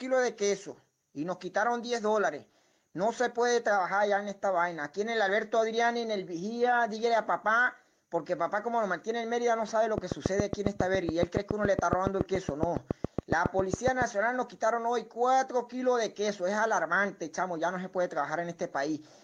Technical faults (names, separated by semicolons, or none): train of clicks